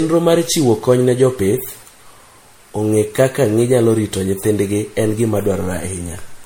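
Speech, and the whole thing carries generation loss: a swirly, hollow, smeared quality that sounds worse than a single MP3 pass at 64 kbit/s ought to. Consonant attacks come out blurred, and nothing survives above about 16.7 kHz. The likely cause is the audio being decoded and re-encoded about five times, with each pass quantising on a shifted frame grid so the noise and spectral holes keep piling up.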